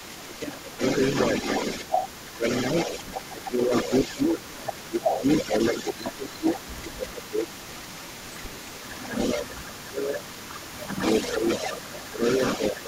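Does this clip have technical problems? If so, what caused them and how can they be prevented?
Yes. An echo leak runs through the whole clip: a delayed copy of the speech trails the original by about 304 ms, sitting roughly 10 dB below it. Room reverberation smears and decays smoothly right behind the sound. This is a distinct, repeated copy arriving a third of a second later. It is likely caused by a far-end loudspeaker whose echo canceller did not fully remove what its microphone picked up. Using headsets, or lowering speaker volume so the canceller can converge, prevents it.

Speech is also suppressed in double talk at 0.36–0.82 s, 2.33–2.75 s, 3.28–10.3 s (about 5 s of it affected), 10.75–10.97 s and from 11.31 s to the end. The voice dips by up to about 15 dB (about 10 dB at 10.75 s), losing level and high end in pieces. This is likely because the canceller turned everything down while both sides spoke. 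Unlike packet loss, the dips follow the overlapping talk rather than cutting cleanly to silence. A full-duplex-capable canceller with less aggressive suppression prevents it.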